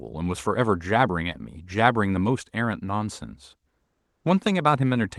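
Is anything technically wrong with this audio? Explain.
Yes. From 3.84 to 4.24 s, discontinuous transmission, likely Opus DTX, paused sending, so comfort noise in place of the background fills those 400 ms: steady, featureless hiss about 5 dB quieter than the real background.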